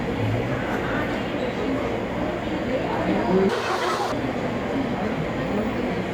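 From 3.49 to 4.12 s, the audio is read two samples at a time, which doubles its speed. The reader treats each pair of samples as a single frame. Playback runs twice as fast and a full octave, 12 semitones, higher.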